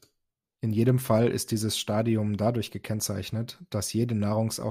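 Speech recording with no audible technical faults anywhere.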